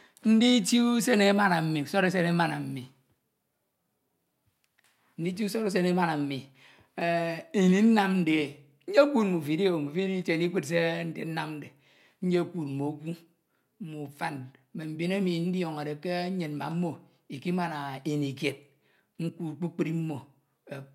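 The speech recording has no audible technical faults anywhere in its signal.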